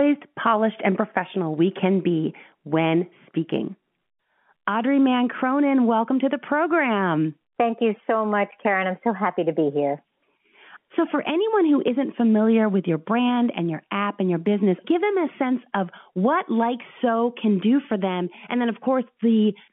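No faults are audible in the speech, which comes over an ordinary G.711 A-law telephone path whose band runs from about 150 Hz to 3.4 kHz.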